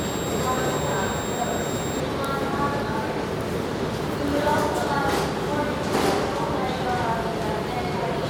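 An everyday sound recording with a switching supply whistle from 0.0 to 2.0 s: a high tone near 4 kHz, drifting between 3.74 and 3.79 kHz, roughly 15 dB below the sound, from a switching power supply running in an audible burst mode or beating with another supply.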